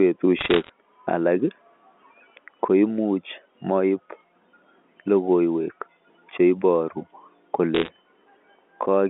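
From 0.39 to 0.69 s, and again from 7.75 to 7.90 s, bit errors on a digital phone line produce bursts of sharp ticks and crackle laid over the speech. Single bits in the 8-bit logarithmic samples have been flipped, so individual samples jump to wrong values. Hits on the sign or upper bits give the loudest clicks. The first burst is denser, near one percent of bits, and the second is slightly sparser. Both sit within the narrow 200 Hz to 3.4 kHz band of the G.711 line.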